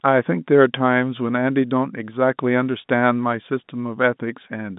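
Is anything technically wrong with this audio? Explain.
No, nothing in this speech clip points to a technical fault. What can be heard is the narrow band of G.711 telephone coding: the sound sits between roughly 150 Hz and 3.7 kHz, with nothing above about 3.8 kHz.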